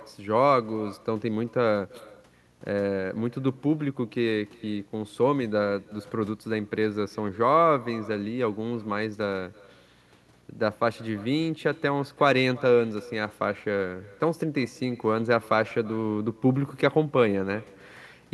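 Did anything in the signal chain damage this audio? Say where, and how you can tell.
Yes, call processing: echo with no canceller runs throughout, each phrase shadowed about 25 dB down roughly a third of a second later, the far-end loudspeaker leaking back uncancelled.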